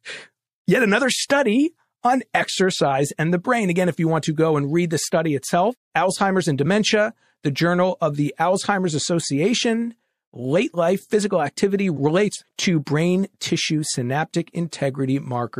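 Pre-echo appears at 1.28, 12.56, 12.85, 13.39 and 14.70 s: a brief hiss, 15 to 23 ms long and about 14 to 23 dB up, just ahead of sharp onsets. The codec's 36 ms window never switched to short blocks, so quantisation noise spread before each attack.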